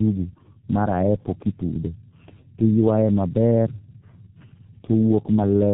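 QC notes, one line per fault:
Throughout: tandem speech coding. Speech sounds rough, warbly and muffled, with nothing above 3.9 kHz. That points to two low-rate speech codecs in a row, each coding the last one's degraded output.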